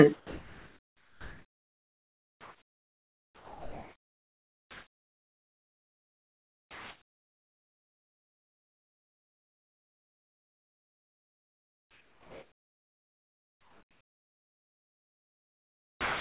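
Speech clip carried over a narrowband call path, with nothing above 4 kHz. From 0.15 s to the end at about 16.2 s, the pauses carry comfort noise in place of the background. The real room sound, sitting about 46 dB below the loudest speech, gives way to a steady, featureless hiss about 5 dB quieter. The likely cause is discontinuous transmission: the sender stops sending audio during pauses and the receiver synthesises shaped noise. A noise gate would leave dead silence instead, and noise suppression would pump and leave residue. Here the filler is even and textureless.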